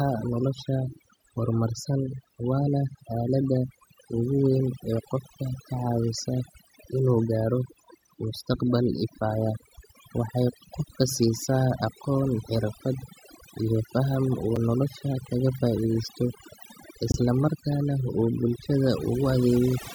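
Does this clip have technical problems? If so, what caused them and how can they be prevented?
Yes. Overdone noise removal runs through the whole speech clip. A noise reducer set too hard pulls frequency bands down whenever they sit near its noise estimate. Quiet voice detail vanishes too, leaving twinkling specks in near-silent gaps. Use gentler reduction settings.

There are two blocks of digital silence. At 14.56 s a 5 ms dropout gives a tick or dip, which fits a 256-sample buffer. At 17.12 s a 21 ms hole fits a 1024-sample buffer. Each time the output buffer was likely not filled in time, so zeros replaced the sound. Larger buffers or lighter processing load would prevent these underruns.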